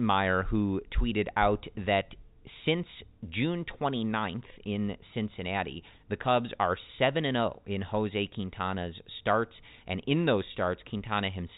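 Nothing stood out on listening to this telephone-band speech recording.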